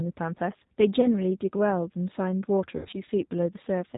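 Throughout, the speech carries the G.729 codec sound. It is band-limited to below 4 kHz, slightly rough and synthetic, which fits an 8 kbit/s codec that rebuilds the voice from a filter, pitch predictor and sparse pulses. Unlike plain low-pass filtering, the texture itself is coarsened.

From 1.01 to 1.08 s, VoIP packet loss concealed by the speech codec shows as a brief smear. About 20 ms of audio went missing and the decoder stretched its last pitch and filter. The weak, distorted sound lingers past the gap. From 2.77 to 2.94 s, a longer stretch of losses is scattered over 160 ms, with the longest run 80 ms. Here the voice is stretched and fades. A simple dropout would be silent and recover instantly.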